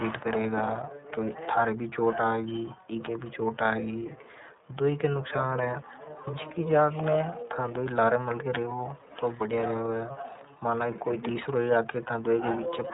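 Speech runs through the iLBC codec for the whole clip. Nothing above 3.8 kHz survives, so it sounds muffled and narrowband. Each frame's excitation is coded on its own, leaving a plainly rough, synthetic edge. That fits 30 ms frames at 13.33 kbps.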